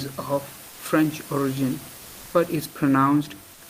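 At 0.69 to 0.79 s, 1.97 to 2.33 s and 3.53 to 3.61 s, the room noise between phrases gives way to comfort noise in place of the background: a flat, featureless hiss, about 2 dB quieter, about 1 dB louder, then about 3 dB quieter. It's likely Opus DTX halting transmission in pauses and the receiver synthesising filler.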